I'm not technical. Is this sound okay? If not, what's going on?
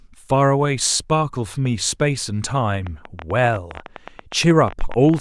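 No. From 2.87 s to the end at 5.2 s there is a train of clicks, roughly thirty of them. They come about 13 times a second, at an uneven pace, ticking over the speech. Electrical interference or a faulty connection or power supply is the likely cause.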